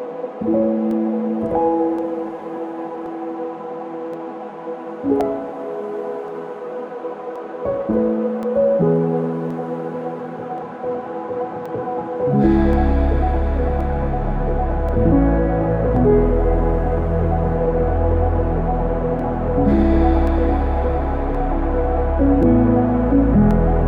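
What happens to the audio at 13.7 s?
At 13.7 s you're right in the middle of a run of clock drift buffer slips that goes from about 0.91 s to 23.51 s. There's a click roughly every 1.08 s while sound is present, about twenty in all. The likely cause is two devices on separate clocks disagreeing by a few hundred ppm, so the buffer between them drifts until around fifteen samples get dropped or repeated, and each of those jumps makes a click.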